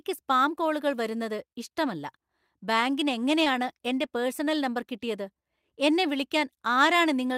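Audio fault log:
3.44–3.47 s, short concealed packet loss: about 20 ms of the speech stream arrived too late or not at all, and the receiver covered roughly 13 ms of the gap by extending the preceding sound before crossfading back into the real signal, leaving a brief smear. Unlike a plain dropout, there is no hard silence or clean click; the hole is papered over with a synthetic continuation, so it smears rather than cuts out.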